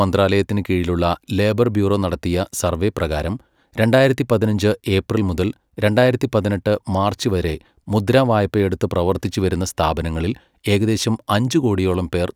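Nothing goes wrong anywhere in this bit of speech, so there's no fault to point to at any moment.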